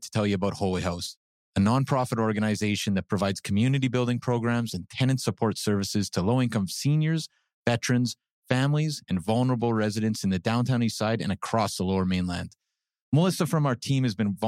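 Nothing in this speech recording stands out as a technical fault, so there's nothing here to flag.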